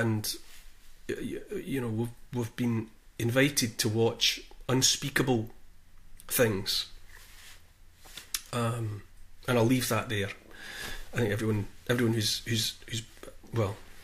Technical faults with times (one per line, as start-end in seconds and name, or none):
none